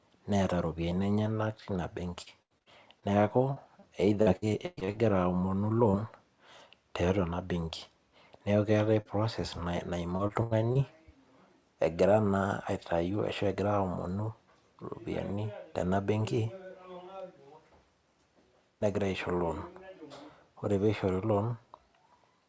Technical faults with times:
2.22-3.04 repeated packet loss (robotic sound)
3.54-3.84 short concealed packet loss
4.22-4.95 repeated packet loss (robotic sound)
9.01-9.07 short concealed packet loss
10.17-10.77 repeated packet loss (robotic sound)

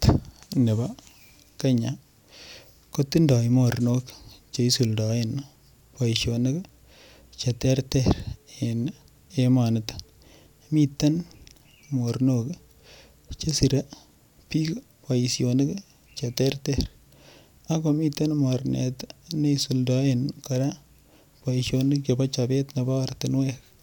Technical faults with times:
none

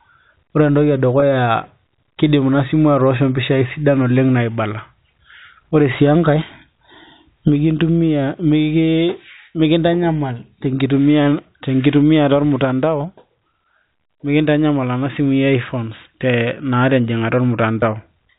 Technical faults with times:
1.20-1.22 packet loss with pitch repetition
17.81 packet loss with pitch repetition

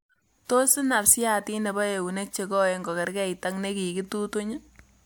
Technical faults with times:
none

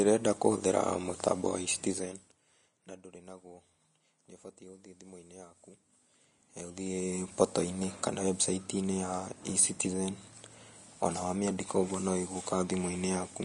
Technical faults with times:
0.00-13.44 Vorbis compression
1.83-2.44 zipper noise

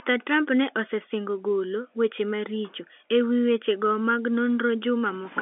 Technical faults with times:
none

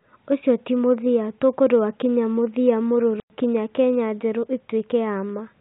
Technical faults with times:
3.20-3.30 packet loss filled with silence

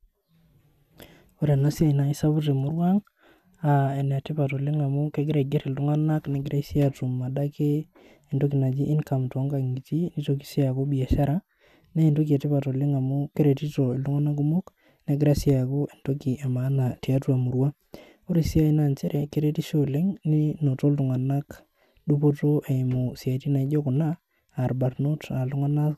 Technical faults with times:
none

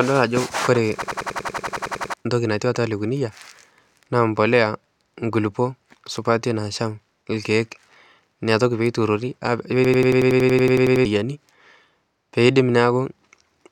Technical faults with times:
1.02-2.14 system hang loop
9.85-11.05 system hang loop

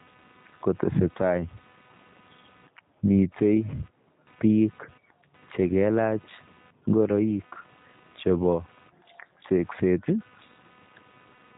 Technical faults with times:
0.00-11.57 computer activity noise
0.00-11.57 G.729 codec
3.70-3.74 VoIP packet loss concealed by the speech codec

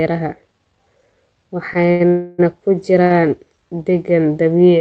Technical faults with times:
1.85-2.02 short stall from a late packet
2.08-2.40 call audio freeze
3.04-3.12 short stall from a late packet

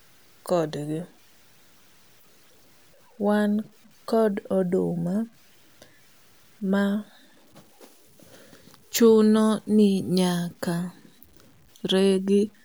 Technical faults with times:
0.00-12.64 low bit depth without dither

